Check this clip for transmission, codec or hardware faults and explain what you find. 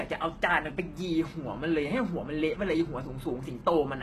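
One fault runs through the whole clip: heavy damage from what is likely HE-AAC compression. The lower spectrum is coded normally, but the treble is rebuilt from copied lower bands, so its harmonics don't line up with those below and s sounds come out gritty and metallic. On a spectrogram the upper band looks smeared and blocky, and it stops dead at 12.3 kHz. The damage points to a very low bitrate, around 16 kbps.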